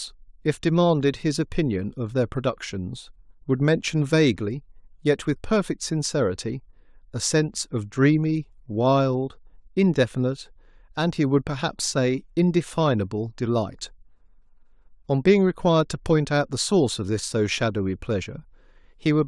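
No technical faults are audible.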